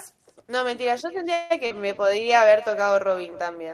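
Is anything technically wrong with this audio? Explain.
Yes, three faults are audible.

Echo with no canceller runs throughout. The far end's loudspeaker output reaches its microphone unremoved, so every phrase returns roughly 300 ms later as a thinner copy about 21 dB below the direct speech.

A call audio freeze occurs from 1.33 to 1.52 s. The last sound is stretched into a fading buzz or hiss for about 168 ms, likely because delayed packets drained the jitter buffer. Speech then resumes where it stopped, with nothing lost but everything after arriving 168 ms later.

Short concealed packet loss follows at 1.66 to 1.72 s. About 40 ms of audio never arrived, and the decoder bridged it by extending the preceding sound before blending back in, giving a brief smear or wobble where the real signal should be.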